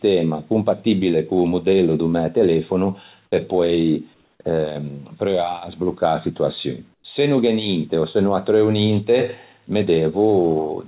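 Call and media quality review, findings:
Comfort noise in place of the background, 4.14–4.40 s and 6.94–7.04 s. Likely discontinuous transmission at the sender: voice detector stops packets during pauses, receiver synthesises shaped noise. Real background, about 42 dB below the speech peaks, turns to smoother, featureless noise, about 3 dB quieter in the first gap and about 13 dB quieter in the second. Band-limited to 4 kHz throughout, consistent with G.711 A-law at 64 kbps.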